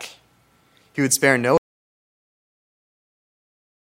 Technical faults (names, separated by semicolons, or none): audio dropout to silence